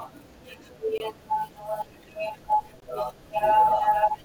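Speech clip with two blocks of digital silence, at 0.98 s and 2.80 s, each about 20 ms long. The audio drops straight to zero and comes back with no fade, so you hear a short hole, most likely the output buffer not being filled in time.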